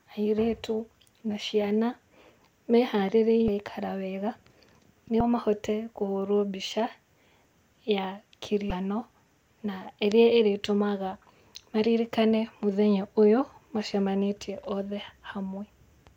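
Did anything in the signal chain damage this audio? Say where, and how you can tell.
Yes. Damaged data in a compressed stream, at the codec stage, leaves brief glitches in the speech at 3.45–3.49, 5.18–5.21 and 8.68–8.71 s. On a spectrogram each shows as a short vertical break. The decoder misreads corrupted frames and loses sync until it finds the next frame header.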